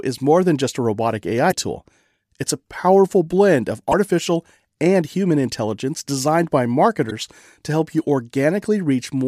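Damaged data in a compressed stream strikes the speech three times, at 1.48 to 1.53 s, 3.88 to 3.94 s and 7.07 to 7.12 s, each lasting about 50 to 57 ms. Corrupted bytes in the encoded stream leave the decoder misreading or rejecting those frames and losing sync until it finds a valid frame header. Each spot breaks the speech briefly as a chirp, squawk, click or short hole.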